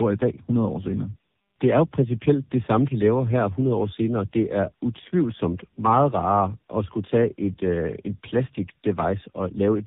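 Speech runs through two low-rate speech codecs in a row for the whole clip, a clear case of tandem speech coding. It sounds like a GSM full-rate stage, a G.711 hop, then AMR-NB at around 7.95 kbit/s, with the second coder re-encoding the first one's damage. The result sounds rough, muffled and warbly. A spectrogram shows nothing above 3.8 kHz and smeared, blotchy harmonics, while the waveform looks coarse rather than clipped.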